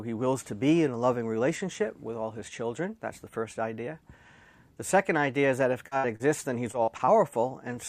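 At 5.87 to 5.93 s there is a short concealed packet loss. About 40 ms of audio failed to arrive in time, and the receiver bridged it by extending the preceding sound, following its pitch where it was tonal and its spectral shape where it was noisy, before cross-fading back into the real signal. The result is a brief smear or wobble. A second event of the same kind, again about 40 ms, follows at 6.16 to 6.22 s and is heard as another short smear.

Between these, from 5.97 to 6.06 s, comes a burst of packet loss of about 60 ms. The last sound before the gap is continued and progressively attenuated, so a held buzz or fading hiss replaces the original material. When playback picks up again, the part that should have filled those 60 ms is simply gone, and the sound jumps ahead.

From 6.72 to 7.09 s there is repeated packet loss (robotic sound). Four separate gaps fall within under 0.4 s, the longest about 41 ms, and together they total about 100 ms, roughly a quarter of that stretch. 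Each hole is patched by extending the previous sound, and the next loss arrives before the signal has settled. This gives a choppy texture with small pieces of audio missing throughout.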